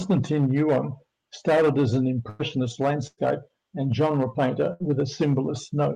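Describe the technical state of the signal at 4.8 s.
At 4.8 s the signal sits inside a burst of packet loss running from 4.73 to 4.83 s. The receiver had nothing to play for that stretch. It filled about 65 ms by extending the last sound and fading it, giving a held buzz or dying hiss. Then playback resumes with about 60 ms of the original skipped. Hard clipping is also present here, as across the whole speech clip. The signal is driven about 10 dB past the limit, so around one sample in twenty is cut flat, adding harsh crackle on the peaks.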